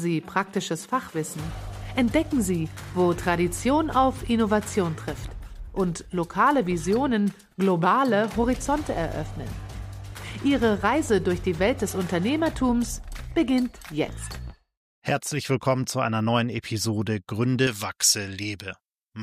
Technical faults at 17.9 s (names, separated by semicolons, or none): pre-emphasis left on